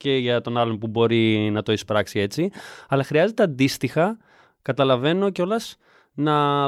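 The speech signal carries no audible transmission, processing or recording fault at any point.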